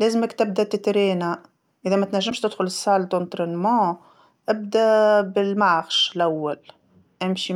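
At 2.29 to 2.31 s, right after "تبدا تترينا إذا ما", the speech jumps forward and a brief chirp, burst of noise or short hole stands in for the missing stretch. The cause is likely a broken MP3 bit reservoir: a frame of roughly 26 ms went missing, so the next frame pulled its borrowed bytes from the wrong place and decoded garbage. A spectrogram shows a brief disruption breaking the speech pattern, and the waveform shows an abrupt discontinuity.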